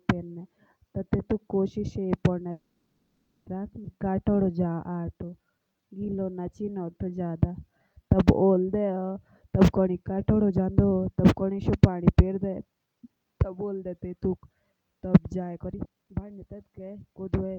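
Call audio freeze, 2.51 to 3.48 s: the sound stalls into a decaying extension of the last moment, ending in about 280 ms of silence, then resumes where it stopped. This is likely packets delayed in transit draining the jitter buffer, which inserted a 950 ms gap with nothing lost.

Skip ahead, 3.84 to 3.87 s: playback jumps forward with only a brief 10 ms join. Roughly 0.7 s of audio is gone because a stretch was dropped while later audio was already queued.

Jitter buffer slow-down, 3.98 to 9.00 s: the audio plays at 88% speed with unchanged pitch, and sounds are drawn out. The receiver repeated pitch periods and bits of pauses to rebuild its reserve, adding 601 ms.

Jitter buffer speed-up, 9.47 to 13.17 s at 110% and 15.56 to 17.39 s at 132%: the speech is hurried but keeps its pitch. The buffer held more than its target and trimmed short pitch-period pieces, removing about 0.4 s and then about 0.5 s.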